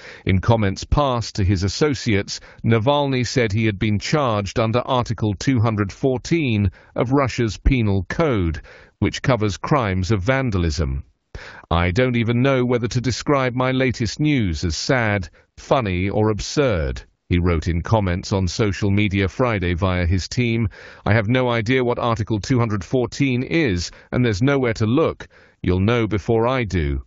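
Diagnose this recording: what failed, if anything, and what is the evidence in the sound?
The failure is AMR comfort noise, at the call-processing and codec stage. The phone's discontinuous transmission judged the talker silent and stopped sending speech frames three times: 11.21 to 11.33 s (120 ms), 11.67 to 11.69 s (20 ms), and 17.23 to 17.29 s (60 ms). In each gap the receiver substituted smooth synthetic noise built from a coarse level-and-spectrum description, so the real background briefly switches to a steadier hiss and back. The surrounding speech carries light AMR wideband coding at 12.65 kbit/s.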